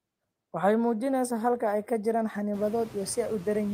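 Noise suppressor artifacts run through the whole speech clip. The suppressor pulls the noise floor down by about 18 dB in gaps between words and lets it back up beneath speech, so the background pumps with the talking. On a spectrogram, the noise band darkens in pauses and reappears under each phrase. From around two and a half seconds the room noise rises by about 16 dB to sit about 20 dB below the speech.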